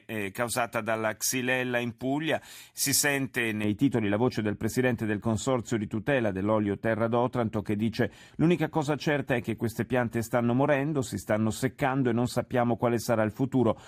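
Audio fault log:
3.64 to 13.87 s, de-emphasis applied wrongly: Right after "si sente", the speech turns dull and muffled and stays that way to the end. A treble cut meant to reverse pre-emphasis has been applied to audio that had none, or applied twice. The response tilts smoothly downward above the midrange. At 10 kHz it sits about 11 dB below 1 kHz. Sibilants and consonant edges lose their crispness. The speech sounds veiled.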